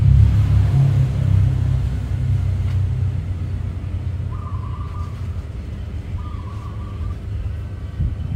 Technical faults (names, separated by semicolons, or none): mains hum; damaged data in a compressed stream